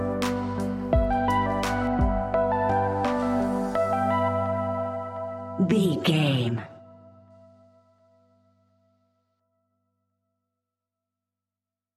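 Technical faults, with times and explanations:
1.87 to 7.30 s, de-emphasis applied wrongly. A treble cut meant to reverse pre-emphasis was applied where none existed, or applied a second time. The response falls smoothly with frequency, to about 13 dB down at 10 kHz against 1 kHz. The sound turns dull and muffled.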